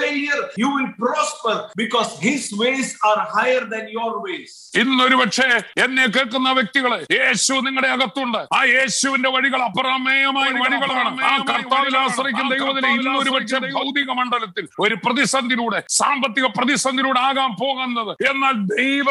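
A doubled audio track runs from 10.41 s to 13.83 s: a second full-band copy of the sound trails the original by about one second, roughly 5 dB quieter, with no decay or room colour, and cuts in and out abruptly, likely from a second capture through a slower path.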